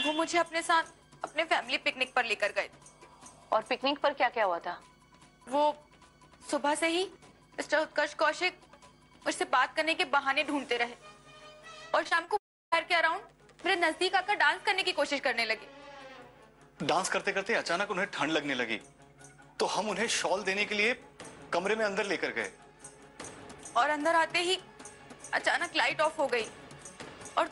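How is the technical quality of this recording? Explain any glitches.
The recording has two network faults, packed into under a second around the 12-second mark.

From 12.03 to 12.29 s there is repeated packet loss (robotic sound). Four packets went missing in quick succession, the longest gap 22 ms, and each was patched by extending the preceding audio. About 29% of that span is concealment, so it sounds choppy and robotic with fragments dropped out.

From 12.37 to 12.74 s the audio stops, likely a long network dropout in which nothing arrived for roughly a third of a second. The receiver continues the last sound as a fading buzz, but the gap lasts long enough that most of the stretch, about 320 ms, is silence, and the audio then resumes with that portion gone.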